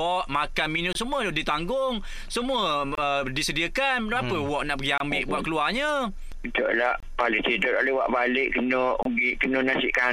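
At 0.93–0.95, 2.95–2.98, 4.98–5.00, 7.00–7.03 and 9.03–9.05 s, a gap between chunks leaves about 25 ms of hard-edged silence every 2 s. Unlike a dropout, no sound is missing: playback resumes where it paused, so the audio is only delayed at each join.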